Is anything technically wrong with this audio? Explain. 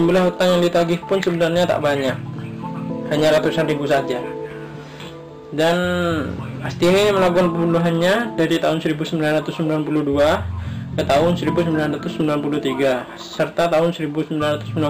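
Yes. Hard clipping runs through the whole clip. The signal arrives at some stage roughly 11 dB hotter than that stage can pass, so every peak is sliced flat at the ceiling, with a few percent of samples pinned there. Those squared-off tops generate high-order harmonics well above the original content. The result is a harsh, gritty fuzz riding on each loud moment rather than occasional crackle, because the overload is large.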